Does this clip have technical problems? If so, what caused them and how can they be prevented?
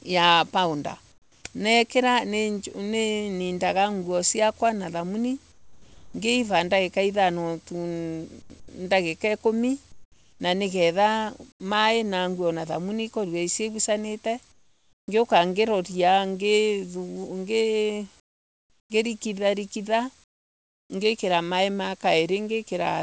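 Yes. Comfort noise in place of the background, at 1.12, 5.52, 8.42, 9.92, 11.52, 14.52, 18.20 and 20.24 s, in pauses lasting 80 to 700 ms: the real room tone is replaced by a steady, featureless hiss about 8 to 25 dB quieter, likely from discontinuous transmission. Unlike a gate, it never drops to true silence. Disabling DTX or using a less aggressive voice detector would prevent it.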